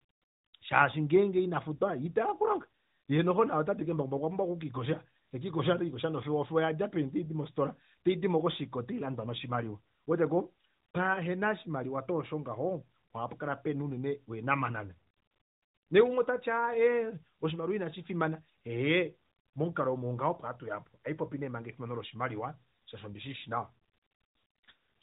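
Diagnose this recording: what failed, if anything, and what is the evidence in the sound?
Nothing in the chain has failed in this speech recording. The audio has passed through the AMR narrowband mobile codec working as designed: nothing reaches above 4 kHz, and the codec's marks are light, which fits its top 12.2 kbps mode.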